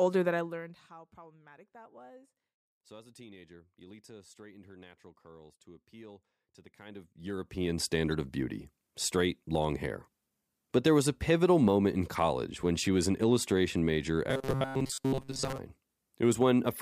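At 8.12 s a corrupt frame is decoded: a brief, fairly quiet blip, peaking around -35 dBFS, lasts about the span of a couple of compressed frames. Flipped bits in the frame led the decoder to misread gains or codes, so energy lands at wrong frequencies and the sound becomes a short squeak rather than what was said. A click or dropout is different: a click is a broadband tick and a dropout is silence, while this blip puts energy at wrong frequencies.

From 14.30 to 15.58 s the speech turns into a rigid metallic buzz fixed at 134 Hz, a robotic sound from repeated short buffers. It likely comes from new audio arriving too seldom, so playback keeps looping the last short chunk. The buzz frequency fits a chunk about 7.5 ms long, and most of that stretch is repeats rather than real audio. A pitch-shifted or vocoded voice would still have moving intonation, but here the buzz stays fixed while the syllables only roughly follow.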